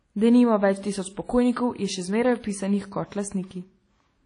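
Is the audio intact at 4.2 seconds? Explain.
No. At 4.2 seconds, as across the whole speech clip, there is a ringing, washy quality with hiss that swells and fades with the signal, likely from WMA compression at a low bitrate, around 32 kbps. The long transform blocks smear quantisation noise over tens of milliseconds, and a spectrogram shows nothing above 10.1 kHz, gaps where weak components were zeroed, and smearing around onsets.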